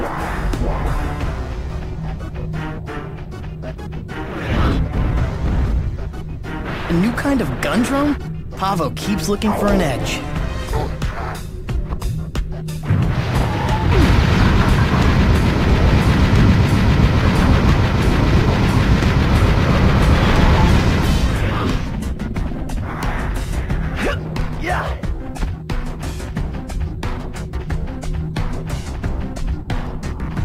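Skip ahead at 2.77 to 2.79 s: roughly a second of audio never reaches playback. It was either lost in transit or discarded when the jitter buffer overflowed while newer audio was already queued. With no fill inserted, the sound before the jump butts straight against the sound after it. The result is an abrupt forward leap and a seam where material simply vanishes. The total delay drops by about the same second.

Jitter buffer speed-up from 2.87 to 7.01 s, and again from 7.56 to 8.33 s: after the jump the buffer is still holding more audio than its target. The receiver trims it down by repeatedly cutting out tiny pitch-period-sized slices. In the first stretch the sound runs at 111% speed and sheds around half a second. The second is milder at 107% and sheds only a few tens of milliseconds. Pitch stays put, but the pacing feels rushed.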